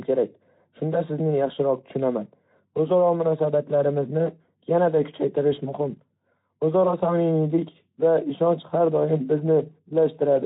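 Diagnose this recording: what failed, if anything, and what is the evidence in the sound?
Nothing failed; no fault is audible in this recording.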